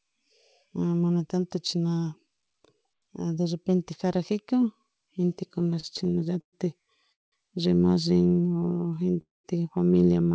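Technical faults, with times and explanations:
5.52–7.34 s, repeated stalls (stutter): The sound drags and catches here because packets kept arriving too late for the jitter buffer, which ran dry 14 times. Each time the receiver stretched the last sound to cover the hole. About 461 ms of filler, a quarter of the stretch, went in, with the longest gap 194 ms, and nothing was lost. On a spectrogram, short smeared horizontal bands repeat across the span. In the waveform, the longer fills taper in level.
8.09–9.18 s, jitter buffer slow-down: The sound plays at about 87% speed with its pitch unchanged, so sounds are drawn out. The buffer was rebuilding its reserve by repeating single pitch periods or bits of pauses many times over, adding about 150 ms in all. In the waveform, near-identical cycles repeat back to back. On a spectrogram, the harmonics run longer and flatter than the surrounding sound, with the same spacing.
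8.53–9.16 s, scattered short gaps: Within the slowed stretch, a handful of brief ticks and smears show where single packets went missing or came late, around four of them. Each one was patched by continuing the preceding sound. They are very short, roughly 10 ms at most and well under a tenth of the span in total, and nothing is missing. A spectrogram shows thin vertical seams or tiny blurred slivers. The waveform shows small discontinuities.
9.21–9.46 s, call audio freeze: The sound stops for a quarter second. A brief fading buzz or hiss is followed by about 190 ms of near silence, and the audio then resumes where it left off. This is likely the jitter buffer emptying while packets were held up in transit. About 232 ms was inserted in total, with nothing lost. The spectrogram shows a short decaying smear and then an empty column. In the waveform, the amplitude fades to a flat line. Above 8 kHz the spectrogram stays blank, as expected from a wideband call codec.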